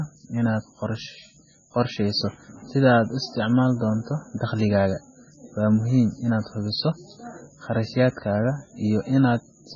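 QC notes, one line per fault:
Throughout: likely MP3 compression, pointing to about 16 kbps. Nothing above 7.3 kHz, and weak bands flicker between frames, so it sounds heavily watery.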